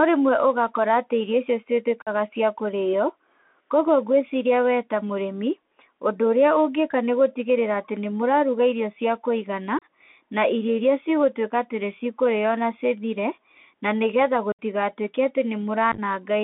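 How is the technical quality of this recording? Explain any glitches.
The recording is compromised by a narrowband Bluetooth headset link and four short dropouts.

Throughout, the speech passes through a Bluetooth CVSD headset codec, consistent with a 64 kbps link that encodes each sample as a single up-or-down step. The band is confined to about 300 Hz to 3.5 kHz, so the voice sounds thin. Loud, bright sounds outrun the adapting step size and distort, sibilants turn scratchy, and a granular hiss sits underneath.

Unconcealed Bluetooth headset packet loss occurs at 2.02 to 2.09 s, 9.79 to 9.83 s, 14.52 to 14.59 s and 15.92 to 15.99 s. Lost voice packets were replaced with silence or an idle pattern rather than being masked. The losses amount to about 45 ms, 30 ms, 67.5 ms and 41 ms, with the longest pointing to roughly twenty packets. The first three are abrupt holes, and the speech returns briefly quieter. 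The last is scattered over 60 ms in runs of up to 11 ms and sounds like a rough crackle.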